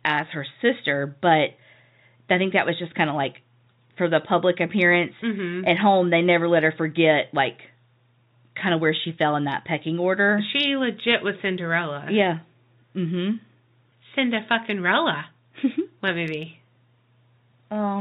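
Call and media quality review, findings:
No call or media quality findings for the speech on this G.711 telephone path.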